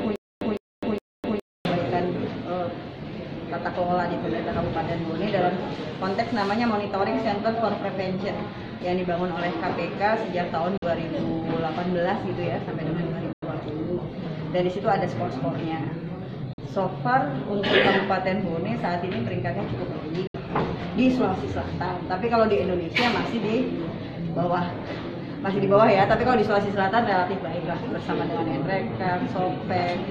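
A stutter with silent gaps runs from 0.0 to 1.65 s, already under way when the audio begins: a 157 ms burst repeats three times every 413 ms, with 255 ms of silence between, likely from a stalled player replaying its last fragment. Bluetooth dropouts then cut holes at 10.77–10.84 s (46 ms), 13.33–13.43 s (93 ms), 16.53–16.60 s (46 ms) and 20.27–20.36 s (70 ms), likely from lost wireless packets. The sound resumes as if it had played on.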